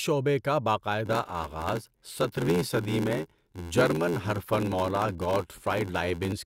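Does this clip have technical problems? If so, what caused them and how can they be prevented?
Yes. From 1.05 s to 6.33 s the speech carries a steady buzz at about 86 Hz and runs slow, at 0.861 of normal speed, while its timbre stays about the same. This is a block size mismatch (padded): one stage hands over blocks shorter than the next stage reads, and the shortfall is filled with silence, so a brief gap recurs in every block. An 86 Hz gap rate fits a 512-sample read size. To prevent it, make sure every stage in the chain agrees on one block size.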